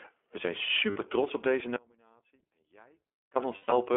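Speech here, squeezed through the iLBC codec the whole way. The band stops around 300 Hz to 3.4 kHz, and it has that plainly rough, slightly synthetic edge. It fits iLBC's 15.2 kbps mode, which codes each 20 ms frame on its own. At 0.90 to 0.98 s you get lost iLBC frames: about 60 ms where the decoder repeats the last pitch cycle with some noise, so it sounds like a brief buzzy held vowel before snapping back. A messier patch of lost frames hits from 3.56 to 3.77 s, with 160 ms missing across 200 ms and the longest stretch around a tenth of a second, giving a held, fading vowel-like fill. In between, from 1.76 to 3.36 s, there's an audio dropout to a faint residue. The speech cuts out abruptly for about 1.6 s, leaving only a faint trace roughly 35 dB down, which likely means the feed was lost while the path after it stayed open.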